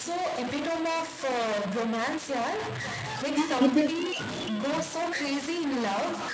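From start to finish the speech carries distortion, and its pauses fill with hiss, most likely a stuck bit in the converter path; the waveform shows jagged offsets and the spectrogram shows broadband noise between phrases. Also throughout, echo with no canceller returns every phrase about half a second later, roughly 16 dB quieter and thinner, seen as faint delayed copies of each syllable's pattern, all below the 8 kHz ceiling of the G.722 call.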